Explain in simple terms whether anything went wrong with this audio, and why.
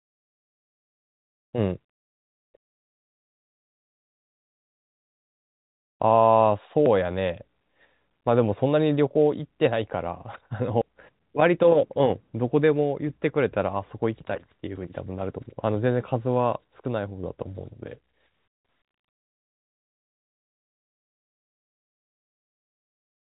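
Three quick skips jump the speech forward, at 6.86, 10.82 and 14.77 seconds, each dropping a few hundredths of a second. This is audio missing between chunks: the recording was likely handled in pieces of about 4 seconds, losing a sliver at each join.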